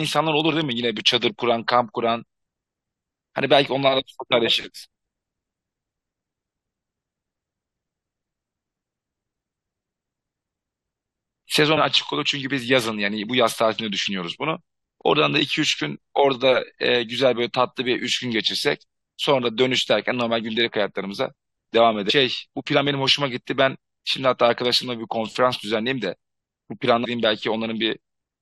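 Damaged data in the compressed stream makes the decoder misread frames, lose sync and hunt for the next valid header. In this speech it breaks through as brief chirps or blips at 11.74 to 11.78 s, 22.09 s and 27.04 s.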